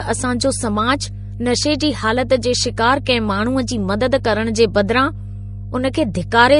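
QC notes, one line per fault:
Throughout, mains hum. A steady low tone at 50 Hz sits under the speech for the whole clip. It is loud, only around 10 dB below the speech itself. A ground loop or a transformer near the signal path has coupled the power line into the audio. The hum carries some low harmonics. The tone never changes, so it stays audible in the pauses in the speech.
Throughout, transcoding between lossy codecs. Nothing is present above 10.6 kHz, so the speech sounds dull and closed in. The artefacts of the different codecs are heard together. This mix points to likely transcoding, with a low-rate Vorbis encode near 35 kbit/s feeding an MP3 encode near 64 kbit/s. The second codec spends bits recoding the first one's damage, and the lowest cut-off carries through.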